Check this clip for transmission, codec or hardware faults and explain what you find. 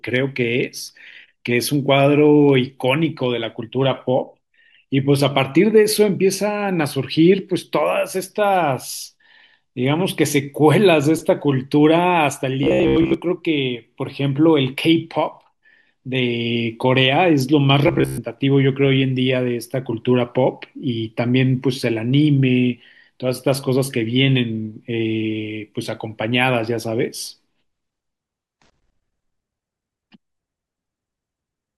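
Two short stretches of this speech clip carry a transmission-type fault; nothing else stands out. Robotic sound from repeated short buffers appears from 12.63 to 13.14 s and again from 17.88 to 18.19 s. The voice collapses into a stiff, metallic buzz near 67 Hz that still loosely traces the speech. That pitch is the signature of a roughly 15 ms slice being replayed over and over, most likely because new audio arrived late and the playback side kept re-looping its last buffer while most of the real signal in those moments went missing.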